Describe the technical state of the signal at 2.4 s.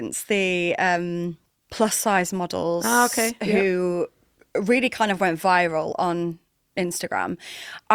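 At 2.4 s the signal is intact, with no technical fault to be heard at that moment.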